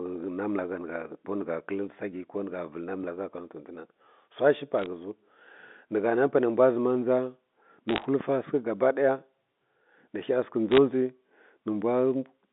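A phantom power thump lands at 3.04 to 3.11 s, and a second at 8.21 to 8.32 s. In each, a supply switched on or off on a live input sends a sudden DC step through the coupling capacitors, which the input hears as a deep, dull knock. Both die away fast, in about 17 ms and 25 ms respectively, so they come across as short punches rather than boomy swells.

Bit errors on a digital phone line appear at 4.79 to 4.86 s, just before "ghə ziw", again at 7.89 to 8.05 s, and at 10.71 to 10.78 s. On this G.711 mu-law line, with its narrow band of about 200 Hz to 3.6 kHz, a rate of roughly half a percent of bits arrives flipped. Each flip corrupts a single sample, and hits on the sign or upper bits jump the waveform abruptly. The result is brief bursts of sharp ticks and crackle laid over the speech, with the longest burst near 8 s.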